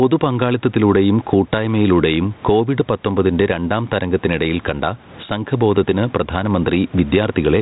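Gain pumping runs from start to finish. The room noise normally sits about 35 dB under the speech, and the gain gets shoved back down the moment the talker gets loud, a swing of around 15 dB. The likely cause is input gain set far too hot for the mic, with a fast limiter or compressor clamping every peak. That leaves loud and quiet passages squashed close together. The band-limited telephone sound fits light G.726 ADPCM at 32 kbit/s.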